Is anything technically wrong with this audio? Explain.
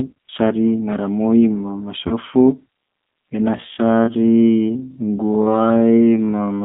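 Yes. Three problems can be heard.

Throughout, the speech has passed through the G.729 codec at 8 kbit/s, which rebuilds each 10 ms frame from a vocal-tract filter, a pitch predictor and a few pulses. The line is limited to roughly 200 Hz to 3.6 kHz, so the speech sounds thin, rough and clearly synthetic.

From 2.08 to 2.14 s, just after "sari ngaramoi ma", VoIP packet loss concealed by the speech codec occurs. About 30 ms of audio went missing, which fits a single lost packet. The decoder extended its last pitch and filter at falling gain, so the sound stretches into a fading buzzy tone or coloured noise and stays weak for a moment after the stream resumes.

From 3.54 s to the end, the audio is a time-stretched section, likely made by software that repeats short pieces to lengthen it while keeping the pitch. The pace drops abruptly to about 0.56 times normal speed. The pitch stays the same, and the slowed speech drags.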